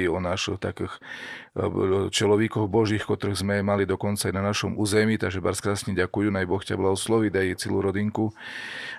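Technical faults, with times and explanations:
No technical faults are heard in this clip.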